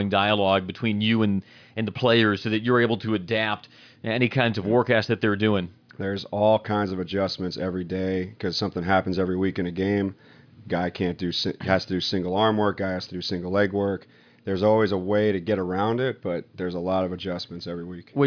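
No audible technical faults.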